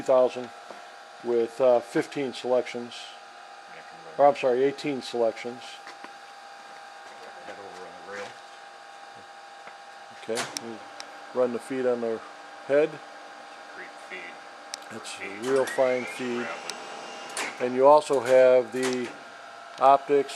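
No technical faults can be heard anywhere in the audio; the signal stays continuous and steady throughout.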